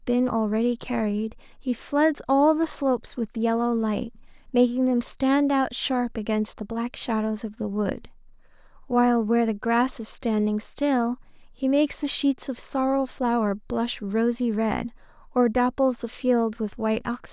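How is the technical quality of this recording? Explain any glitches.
No technical faults are audible anywhere in the recording, so there are no glitches to explain.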